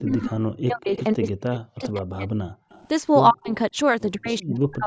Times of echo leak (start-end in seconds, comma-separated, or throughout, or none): 0.96-1.04, 2.70-2.88